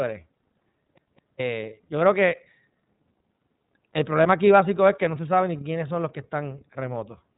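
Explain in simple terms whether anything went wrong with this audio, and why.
Two things went wrong. Throughout, the speech has the iLBC codec sound of an internet phone call. Nothing above about 3.8 kHz survives, so it sounds boxed-in. Each 30 ms slice is coded on its own, which gives a slightly rough, synthetic grain rather than a plain muffled telephone tone.

From 0.98 to 1.40 s, just before "yo creo", the CD gets stuck on one turn. The same 0.21 s snippet plays twice, with a tiny silent gap at each jump back. It sounds like a skipping disc because the repeats are identical and evenly spaced.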